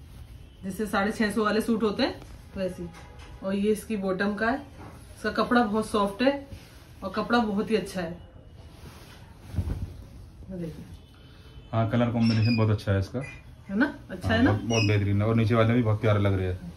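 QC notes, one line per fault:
No faults found. Nothing in the audio needs a QC note.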